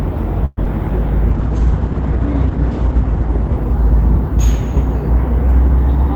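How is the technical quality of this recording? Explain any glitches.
The recording has three call-transmission glitches packed into its first few seconds.

From 0.45 to 0.59 s there's a call audio freeze. The last sound gets stretched into a fading buzz or hiss for about 117 ms, dipping to silence just before the audio picks up again. That's likely a jitter buffer running dry while packets were held up. Nothing is lost; it's just delayed.

Right after, at 0.65 to 0.68 s, comes a short concealed packet loss. About 20 ms of audio never arrived, and the decoder papered over it by extending the preceding sound. You hear a quick smear or wobble as the playback catches up slightly.

Then from 1.32 to 4.37 s there's a call bitrate drop. The encoder went from 32 kbps down to 10 kbps and stayed at that lowest rate for about 1.7 s. Bandwidth shrank from 20 kHz to 8 kHz, so the sound turns muffled and rough until the bitrate recovers.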